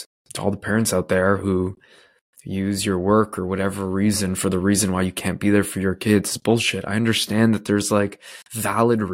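No technical faults can be heard anywhere in the recording.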